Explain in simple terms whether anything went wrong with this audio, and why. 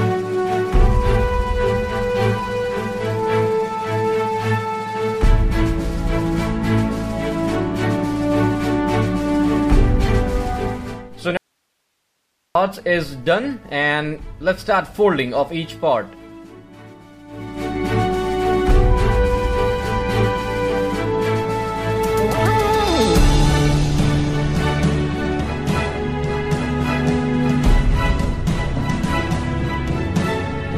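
At 11.37 seconds the sound suddenly cuts out, leaving only a soft hiss, then snaps back at 12.55 seconds, about 1.2 seconds later. This is an audio dropout to a faint residue: the signal was likely lost briefly while the recording chain stayed switched on.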